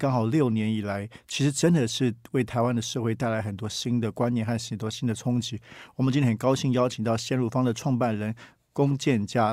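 A speech recording with no technical faults to report. Nothing in it needs a time or a cause.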